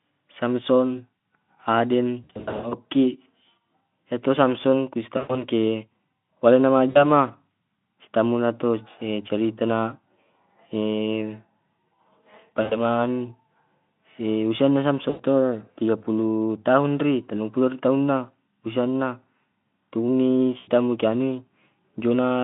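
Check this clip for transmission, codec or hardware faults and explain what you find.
Six dropouts of VoIP packet loss concealed by the speech codec: 2.24–2.75 s, 5.17–5.46 s (after "iya samson ku"), 6.89–7.11 s, 12.61–12.79 s, 15.09–15.22 s (between "usia na" and "ton tiga puluh tahun"), and 20.57–20.71 s. With packets missing, the decoder repeats its last pitch and filter at falling gain, so the speech smears into a fading buzz or coloured noise. On a spectrogram, the harmonics flatten into stretched, decaying bands. The first event breaks up intermittently over nearly half a second.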